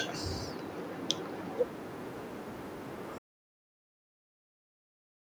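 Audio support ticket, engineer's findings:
Audio dropout to silence, 3.18 s to end of clip. Speech stops mid-flow and does not return; remaining ~2.1 s is silent, no room tone. Likely input loss (device disconnect, link failure or mute) while recorder kept writing samples. Distinct from a fade or noise-gate closure: no decay, no residual floor, just an abrupt cut.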